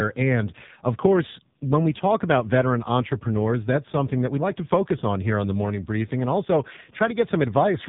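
Throughout, the speech passes through the AMR-NB narrowband mobile codec at a starved rate, consistent with its 5.9 kbps mode, leaving nothing above 3.8 kHz and a heavily buzzy, synthetic timbre.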